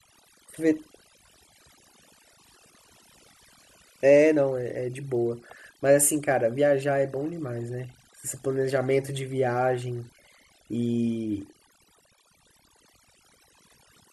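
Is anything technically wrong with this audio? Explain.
Yes. Throughout the speech there is overdone noise removal: aggressive spectral gating mutes bands near the noise estimate, leaving twinkling near-silent gaps.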